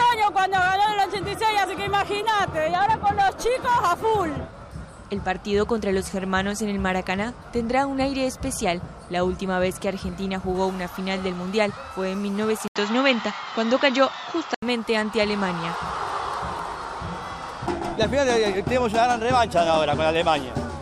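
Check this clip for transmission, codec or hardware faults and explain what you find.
One fault is present. From 12.68 to 14.62 s, the input likely switched to a poorer device. A brief 80 ms gap marks the switch. The sound then loses everything above 7.6 kHz, shifts level by around 5 dB and gains a faint new noise floor.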